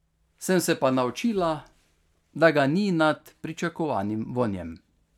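Listening to the speech in this recording, nothing stood out as a technical problem at any point.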